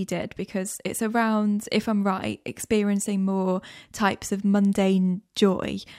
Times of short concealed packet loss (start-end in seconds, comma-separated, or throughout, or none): none